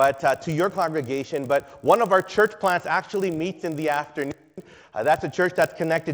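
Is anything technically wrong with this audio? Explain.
Yes. Throughout the clip, the resampler restarted on every block: each 20 ms block was converted from 16 kHz to 48 kHz in isolation, so its edges lacked true neighbouring samples. The resulting edge errors recur at 50 Hz, heard as a low buzz riding on the signal.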